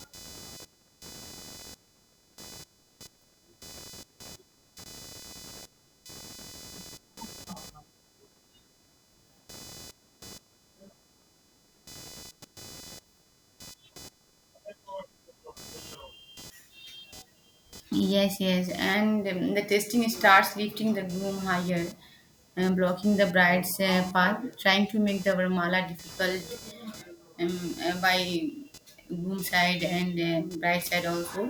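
Computer activity noise runs through the whole recording, sitting roughly 25 dB below the speech. Shifts in the computer's processing and peripheral load are pulling on the ground that the audio circuit shares, so electrical noise leaks into the signal. It comes through as a buzzy, chirping texture pulsing at around 500 Hz, rising and falling with what the machine is doing rather than following the speech.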